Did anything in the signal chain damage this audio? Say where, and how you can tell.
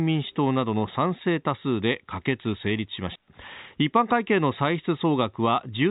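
Yes. A digital wireless dropout in the radio link mutes the speech from 3.16 to 3.28 s. The receiver drops to near silence for about 124 ms with no noise burst on either side, so it's a lost-data mute.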